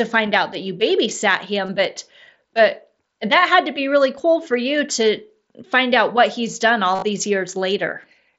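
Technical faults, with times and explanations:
1.66 s to 1.69 s, concealed Bluetooth headset packet loss, just after "out that you babysat". About 23 ms of sound was lost between headset and phone, which fits three dropped headset frames. The phone filled the gap by repeating the best-matching recent stretch of waveform.
6.95 s to 7.03 s, concealed Bluetooth headset packet loss, just after "out what he's done". Gaps are scattered over 75 ms, and the longest run is 37.5 ms. The repeated fill holds as a brief buzzy tone at full level. A small warble follows where real sound returns over the mSBC link.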